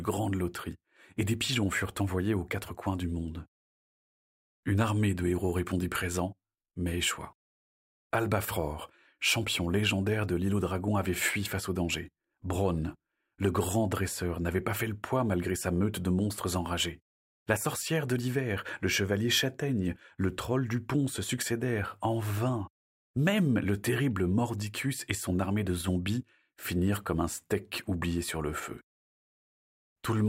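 No technical faults can be heard anywhere in the recording.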